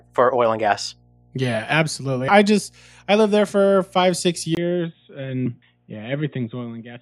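A speech recording carries mains hum throughout: a steady 60 Hz tone roughly 35 dB below the speech, drawn as a thin unbroken horizontal line at the bottom of a spectrogram. At 4.55 s, right after "there for five six", a 20 ms gap appears in the waveform. From there to the end everything above 3.8 kHz disappears, the level drops about 5 dB and a new low noise floor enters, likely an input switched to a poorer device.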